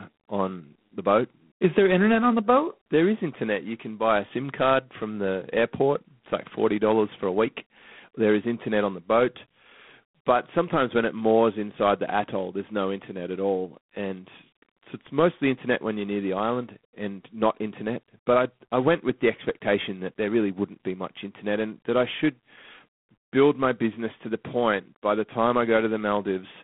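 G.726 ADPCM coding runs through the whole speech clip. Each sample is sent as a few bits describing its difference from an adaptive prediction, and the coarseness here fits the 24 kbit/s rate, three bits a sample. The quantisation error is plainly audible as a rasping hiss that rises and falls with the speech level. The line band spans roughly 150 Hz to 3.5 kHz, and nothing passes above 3.9 kHz.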